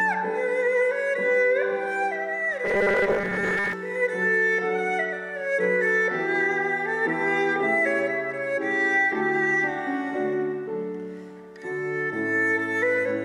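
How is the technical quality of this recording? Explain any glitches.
One glitch is audible. Robotic sound from repeated short buffers, 2.65 to 3.73 s: about half the audio is likely replaced by repeats of a short slice, about 5 ms, forcing a rigid, metallic 200 Hz buzz.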